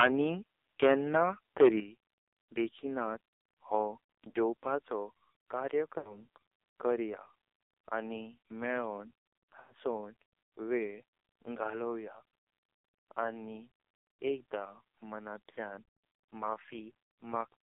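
From start to finish the speech carries the heavy damage of the AMR narrowband mobile codec at 5.9 kbps. The band is held to roughly 300 Hz to 3.7 kHz, and the voice sounds buzzy and synthetic. That steady, constant coloration is what separates it from the brief dropouts later in the clip.

From 0.0 to 0.08 s the opening peaks break up with a harsh, crackling edge. This is likely microphone overload, with the input about 11 dB past the converter's limit and roughly a tenth of the samples flattened. Unlike codec buzz, it is confined to those loudest instants.

At 0.02 s, right inside that distorted burst, both voice and background drop suddenly by about 2 dB and stay lower. This points to the microphone volume being stepped down by the call software. It is a permanent level change, not a fade or a gap.

Lost AMR speech frames follow at 4.30 s (40 ms), 5.98 s (80 ms), 7.62 s (60 ms), 9.60 s (100 ms) and 15.83 s (220 ms). 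Each gap's length fits whole 20 ms frames. In each one the decoder stretches the last sound with falling gain, so the speech smears and warbles. The longer gaps sink toward silence before the voice returns rough and weak. That decaying smear tells these apart from a clean mute or a level step.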